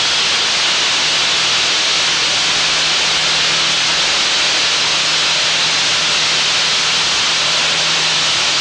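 From start to finish the audio runs at the wrong sample rate: the samples are clocked out more slowly than they were captured, with no resampling. Everything plays at 0.667 times normal speed and drops about 7 semitones, so the sound is sluggish, dark and stretched, which fits 48 kHz material played back at 32 kHz. On a spectrogram every feature sits lower and spreads wider in time, and on the waveform all events look drawn out.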